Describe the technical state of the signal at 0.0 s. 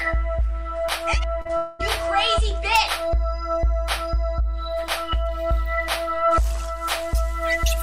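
At 0.0 s the audio is intact, with no technical fault present at that moment.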